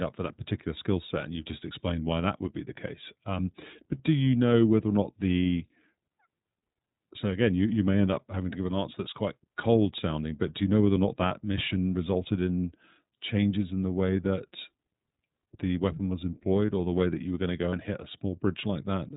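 Throughout, the speech sounds band-limited, a little rough and synthetic, with nothing above 4 kHz and plainly audible coding damage. This is the iLBC codec, a narrowband VoIP coder that codes each frame's excitation independently, with a character that fits its 13.33 kbps, 30 ms frame mode.

At 11.28 s and again at 17.70 s, a brief held, slightly buzzy vowel-like sound replaces about 30 ms of speech before the voice returns cleanly. These are lost iLBC frames. Each gap fits one missing frame, filled by repeating the last pitch cycle mixed with noise.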